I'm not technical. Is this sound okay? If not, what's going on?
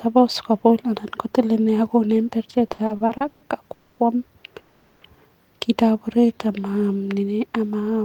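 No, the speech has three kinds of network playback fault, all in the middle of the clip.

From 2.67 to 3.43 s there are repeated stalls (stutter). The speech halts eight times in under a second, the longest halt about 130 ms. Each time the receiver kept playing the last sound to cover the wait, so about 300 ms of filler makes up roughly 39% of that stretch. Nothing is lost, but the speech lurches and drags because the data arrived late and unevenly.

At 3.73–3.99 s and again at 4.59–5.03 s the sound hangs on a drawn-out, fading tone for about 240 ms and then about 420 ms. It never drops to silence. These are call audio freezes, likely from data being held up in transit. The speech then resumes exactly where it stopped, so nothing is skipped. Each pause pushes everything after it later.

From 6.08 to 6.52 s there is a jitter buffer slow-down. The receiver stretched the speech to about 87% of normal speed by repeating tiny slices of it, adding about 65 ms to rebuild its safety margin. 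The pitch stays the same, but the speech sounds slightly drawn out and can waver a little.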